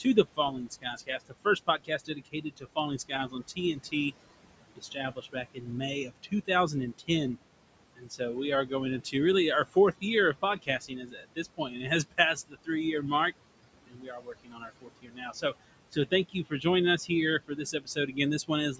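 Noise suppressor artifacts run through the whole clip. The suppressor pulls down, frame by frame, every band it judges to be steady room noise, by about 21 dB. The room noise, about 14 dB below the speech, sinks in the gaps and rises again beneath each phrase.

Speech cut by the noise suppressor occurs at 0.0–4.12 s, 4.75–7.37 s, 7.95–8.21 s, 8.66–9.14 s, 9.66–10.03 s (just after "really our"), 10.34–12.69 s (just before "year mark"), 13.87–16.65 s (just after "year mark") and 16.98–18.8 s. Here the suppressor mistook parts of the speech for noise and lowered them by about 12 to 21 dB, roughly six seconds in all. Soft consonants, word endings or quieter stretches sound swallowed.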